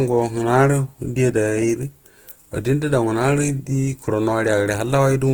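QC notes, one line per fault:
Throughout, Opus compression: the speech sounds rough and grainy, with a noisy texture over its tones instead of swirling gaps, though the band stays full and reaches about 20.2 kHz. This is likely Opus in its music (CELT) mode, where the energy in each band is kept but detail the bits cannot cover is filled with folded lower bands or noise. The plainly audible damage fits a low bitrate of around 16 kbps.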